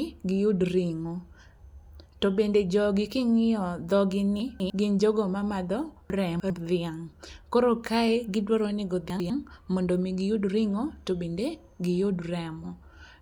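Around 4.4 to 4.7 s the speech jumbles briefly: chunks out of order. A 100 ms piece arrived late and plays two chunks after where it belongs, so nothing's missing but the sequence is scrambled, with three hard joins. The same thing happens at 6.1 to 6.5 s, with the piece three chunks late, and again at 9.1 to 9.3 s, where it's just one chunk late, so it's a quicker stumble.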